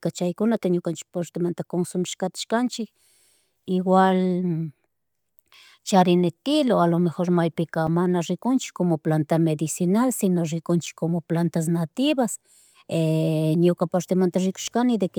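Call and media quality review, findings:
Block of digital silence, 7.87 s, just before "mana riknchik como planta": 5 ms dropout to silence, reads as a tick. Probably the playback path missing its buffer deadline.

Block of digital silence again, 10.86 s, between "como planta medicinal sino" and "como plantas nativas": same 5 ms hole, same tick. Same underrun pattern, no fade in or out, so worth checking buffer timing.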